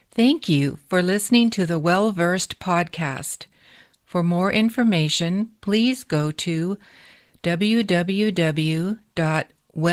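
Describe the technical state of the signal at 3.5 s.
At 3.5 s the speech carries Opus voice compression, present throughout the clip. Low-rate hybrid coding handles the lower band by linear prediction and the top band separately. The excitation is coarse, so speech sounds hoarse and slightly robotic, which fits roughly 16 kbps.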